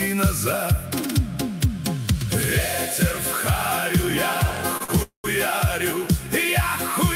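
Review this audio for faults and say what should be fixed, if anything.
Two short stalls from a late packet sit close together. The first runs from 4.77 to 4.82 s, holding the sound for about 29 ms. The second runs from 4.84 to 4.90 s, holding it for about 42 ms. Each time a packet arrived late and the jitter buffer emptied. The receiver stretched the last sound until the packet came, then carried on from the same point. Nothing is lost. Each stall adds its length to the delay.

A call audio freeze follows from 5.02 to 5.26 s. The sound is held as a fading buzz for about 216 ms, and the last 110 ms of that is silent. Playback then resumes exactly where it stopped, so a gap is inserted and nothing is missing. The cause is likely packets held up in transit, draining the jitter buffer completely. The delay grows by the full 216 ms.

A deeper or adaptive jitter buffer, together with a steadier network path, would absorb these late arrivals before the buffer runs dry.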